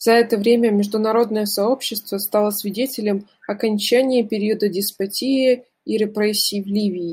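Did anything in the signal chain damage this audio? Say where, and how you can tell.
No, nothing in the signal chain damaged this audio.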